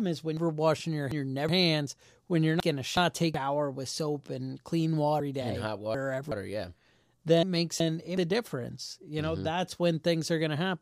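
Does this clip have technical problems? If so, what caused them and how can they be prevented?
Yes. Chunks out of order: roughly 0.37 s blocks were delivered late, so each played after the blocks meant to follow it. The result is a jumbled stretch at 0.37–1.49 s (after "is when", before "hands when you're"), 2.60–3.34 s, 5.20–6.32 s (after "with soap and clean") and 7.43–8.17 s (before "a difference you know"). The longer stretches sound like a block displaced by two positions and the shorter ones by one. Prevent this by tagging each chunk with a sequence number and reordering in a jitter buffer before playback or writing.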